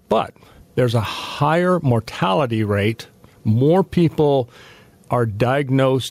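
Gain pumping runs through the whole speech clip. The gain swings by around 10 dB, pulled down under loud sounds. Likely cause: excess input gain hitting a fast limiter.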